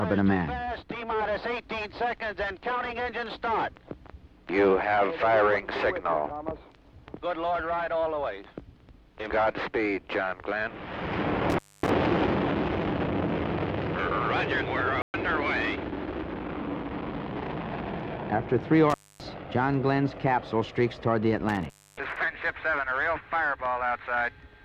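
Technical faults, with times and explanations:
11.50–11.90 s, 18.90–19.23 s and 21.49–22.17 s: intermittent contact. In each the sound breaks up and drops out, with crackle at the edges, as a loose cable or plug opens for about 250, 260 and 280 ms respectively before the connection closes again.
15.02–15.14 s: playback stall. The sound stops in mid-flow for 120 ms, then resumes. This likely means the player ran short of data or its thread was blocked, leaving the output silent until it caught up.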